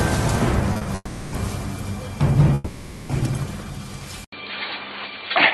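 Right at the start there's a quick run of short stalls from a late packet, at 0.73, 0.77 and 0.83 s. Each time a packet wasn't there when it was due, so the jitter buffer ran dry and the receiver held the last bit of sound for 20, 40 and then 20 ms until the data turned up. Nothing gets dropped. You just hear the sound smear and hang for a moment, with a faint buzzy wobble, three times in a row.

Then come two proper call audio freezes, from 0.95 to 1.34 s and from 2.54 to 3.11 s. The likely cause is packets getting held up in transit long enough to empty the buffer completely. The receiver keeps the last sound going as a fading buzz. In the first one it fills about 370 ms and actually drops to silence for roughly 30 ms before things resume. The second runs about 550 ms without going fully quiet. The audio picks up exactly where it left off, so it's late rather than chopped.

At 4.24 s there's an input switch to a poorer device, likely a change to another mic or a headset call profile. 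You get about 80 ms of silence, and then everything through to the end sounds dull and boxy, with nothing above 4.5 kHz, compared with the wider band the Opus call path carries before the switch. Loudness stays about the same, and there's a new low noise floor roughly 35 dB under the signal.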